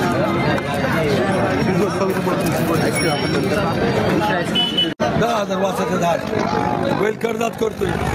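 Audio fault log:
Throughout, gain pumping: loud and soft parts are pulled closer in level and the sound is squashed, swinging about 15 dB, likely excessive gain driving a fast limiter.
6.14 to 8.14 s, overlap-add ripple: rough flutter around 50 Hz, about 11 dB deep, as rebuilt windowed frames overlap without summing to constant gain.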